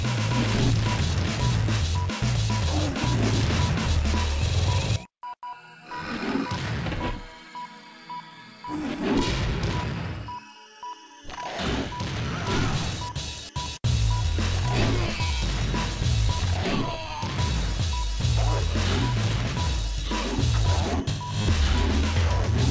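No faults are audible; the audio passes through a call path whose wideband codec leaves nothing above 8 kHz.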